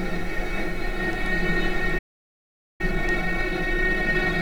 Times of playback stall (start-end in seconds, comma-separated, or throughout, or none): 1.98-2.81